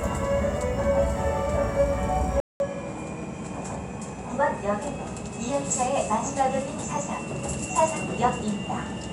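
At 2.40 s the sound cuts out for about 200 ms, then returns duller and a little quieter through to the end, with nothing above 10.9 kHz and a faint new background noise sitting well below the signal. This is the signature of an input switched to a poorer device: the system likely changed microphones mid-recording, and the replacement passes a narrower band and carries its own level, tone and noise floor.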